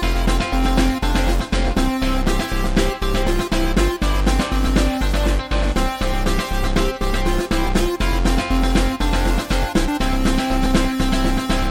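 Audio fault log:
7.67 s and 10.66 s, audio missing between chunks: two tiny skips, three seconds apart, where the sound jumps forward with no gap. A few milliseconds are likely dropped as processing hands over between 3-second chunks, and the two sides are spliced together directly.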